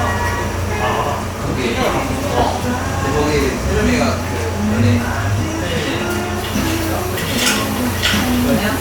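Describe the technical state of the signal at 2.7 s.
No fault is audible at 2.7 s, where the sound comes through intact.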